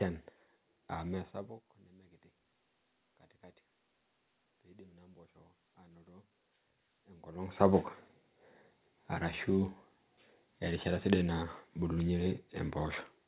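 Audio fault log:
4.62–7.93 s automatic gain rising: input level dropped by about 24 dB, so the gain control slowly added about 6 dB, lifting voice and room noise together.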